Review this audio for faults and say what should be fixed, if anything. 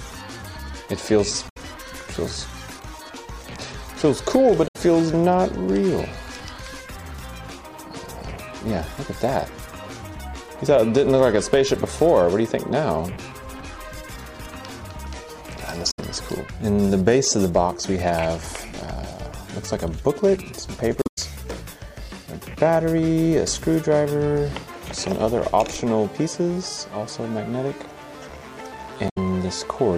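Damaged data in a compressed stream causes brief glitches at 1.48–1.57, 4.66–4.76, 15.90–15.99, 20.99–21.18 and 29.08–29.18 s. The decoder misreads corrupted frames, then resyncs. These appear as blocky broadband spectrogram patches and abrupt waveform breaks. Checksum-verified transfer with retransmission of damaged segments prevents this.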